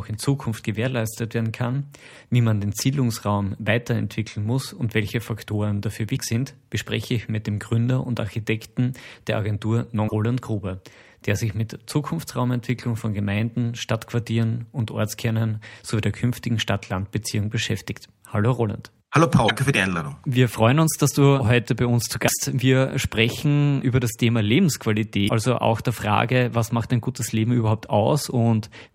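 Short glitches at 6.13, 10.05, 19.45, 22.25 and 25.25 s, each roughly 50 to 80 ms, are damaged data in a compressed stream: corrupted frames briefly throw the decoder off sync.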